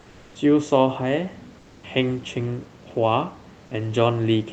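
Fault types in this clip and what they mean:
Comfort noise in place of the background: In two pauses the background becomes steady featureless noise about 2 to 4 dB quieter, likely discontinuous transmission, not the silence of a dropout.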